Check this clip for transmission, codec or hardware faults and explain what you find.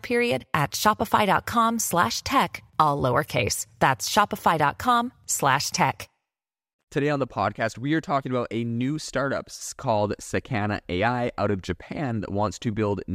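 Checking this speech clip finds nothing to explain.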